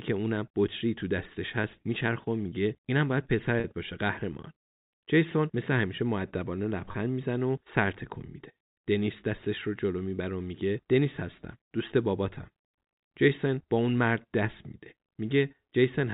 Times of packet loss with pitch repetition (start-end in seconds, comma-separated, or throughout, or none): 3.60-3.64, 6.92-6.94